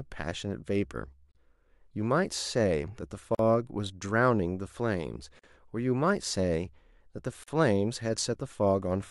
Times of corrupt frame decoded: none

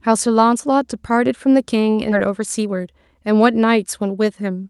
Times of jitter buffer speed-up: 2.27-3.15

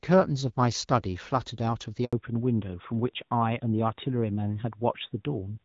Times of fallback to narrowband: 2.13-5.65

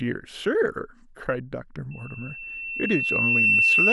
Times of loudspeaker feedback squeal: 1.91-3.92

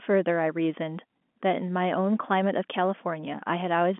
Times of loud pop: none

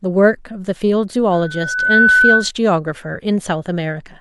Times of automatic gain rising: none

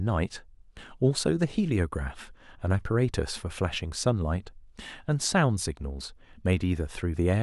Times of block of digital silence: none

